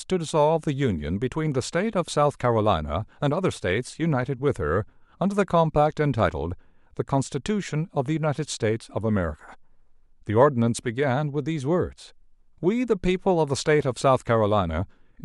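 No audible technical faults occur anywhere in this speech recording.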